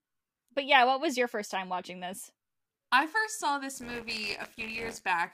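Speech, with buffer tearing from 3.74 to 5.07 s. A robotic rattle at 86.1 Hz sits on the speech. The buffer's writer and reader have slipped. About a tenth of each period replays audio some 20 ms old, hard-joined. The rate fits a 512-sample buffer.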